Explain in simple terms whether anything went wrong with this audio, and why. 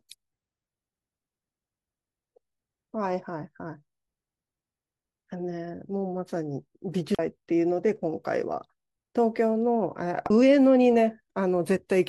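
Two brief glitches at 7.15 to 7.19 s and 10.26 to 10.30 s come from damaged data in a compressed stream: the decoder misreads corrupted bytes and loses its place in the stream.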